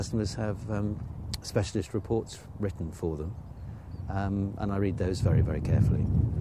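No technical faults occur at any point in the clip.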